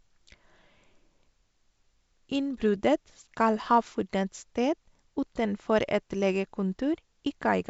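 Nothing stood out on listening to this speech clip, which carries the sound of wideband telephone coding consistent with G.722 at its full 64 kbit/s rate.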